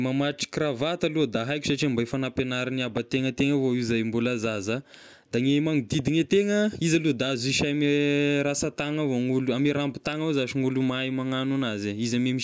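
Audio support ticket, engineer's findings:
No audible faults found in the speech clip. Nothing to escalate from this recording.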